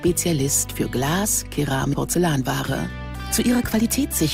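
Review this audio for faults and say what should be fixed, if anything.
There's a skip ahead at 1.93 to 1.95 s: roughly 0.4 s of audio was dropped and playback jumps straight across the join with no gap filled.

From 3.29 to 4.22 s there's a jitter buffer speed-up. The receiver trims short pitch-period slices to shed delay, running about 6% fast at unchanged pitch and dropping around 50 ms overall.

To prevent both, give the jitter buffer more headroom so bursts of late packets don't overflow it, and let it drain excess delay more gradually.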